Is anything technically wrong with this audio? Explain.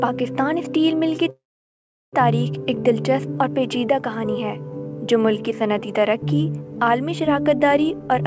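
Yes, there are two faults in this sound, which has passed through a call codec whose cut-off at 8 kHz fits G.722 at 64 kbps.

Call audio freeze, 1.30 to 2.15 s: likely a jitter buffer left empty by held-up packets. The last sound is stretched into a fading fill, mostly silent for about 0.73 s, then the audio resumes with nothing lost.

Jitter buffer speed-up, 7.93 to 8.22 s: the overfilled buffer trims repeated pitch-period slices, about 50 ms in total, so the sound runs at 112% speed, hurried but unchanged in pitch.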